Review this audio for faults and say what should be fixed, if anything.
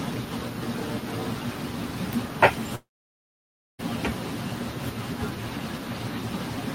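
There's one problem to fix, at 2.75 to 3.81 s. The speech stops dead, trails off into a short fading buzz, and then sits in near silence for about 0.95 s before picking up again later, with about 1.04 s of material simply gone. That's a long network dropout: the stream most likely stopped arriving, so the receiver stretched the last sound briefly and then gave up. To prevent it, use a larger jitter buffer with retransmission or forward error correction on a steadier link.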